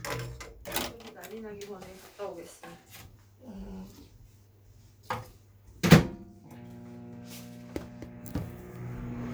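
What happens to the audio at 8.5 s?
At 8.5 s the sound carries on intact, with no dropout, click, distortion or other fault at that moment.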